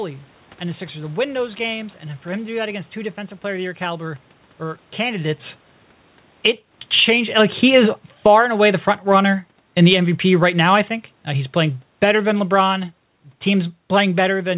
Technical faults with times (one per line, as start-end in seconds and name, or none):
6.30-7.16 automatic gain falling
8.10-10.66 automatic gain falling
11.29-12.89 automatic gain falling